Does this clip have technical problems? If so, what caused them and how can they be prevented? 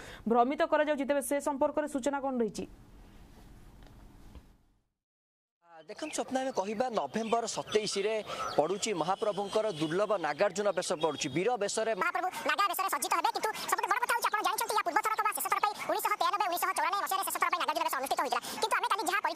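Yes. From 12.01 s to the end at 19.35 s there is a section at the wrong speed: the audio runs 1.75 times too fast, so everything sounds hurried and shifted up by roughly ten semitones. This is likely a playback or edit clocked at the wrong rate. Unlike a pitch-shift or time-stretch fault, pitch and tempo jump together at one instant. To prevent it, confirm that sample-rate and clock settings match across every device and edit before export.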